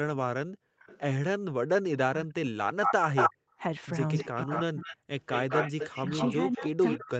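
Right at 0.45 to 0.79 s the room sound gets gated by the echo canceller. While the far end's audio was playing, the background gets pushed down by about 40 dB, then snaps back. The same thing happens again at 3.35 to 3.59 s.

From 0.79 to 1.0 s there's a faint echo leak, a copy of the speech arriving 322 ms late, well under the talker. It's likely the canceller on a loudspeaker end not fully removing what its microphone picked up.

Between 1.9 and 3.06 s the speech is suppressed in double talk. The talker's voice sinks almost to nothing in chunks, likely because both sides spoke at once and the canceller ducked everything it couldn't sort out.

Overlapping that, from 2.83 to 3.34 s, the echo leak comes back much louder, delayed 207 ms and sitting above the speech itself, likely from the same incomplete cancellation.

From 4.14 s to the end, that 207 ms echo hangs around, just a bit below the speech, likely the canceller still failing to remove the loudspeaker pickup. 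The double-talk suppression returns at 4.23 to 5.08 s and again from 6.33 s to the end, with the voice cutting way down, likely the same ducking while both sides talk.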